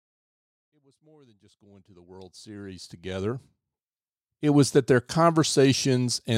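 Nothing's wrong with this speech clip; the level just eases up gently from the very beginning and settles at full strength by about 3.83 s, the way an editor would fade it in.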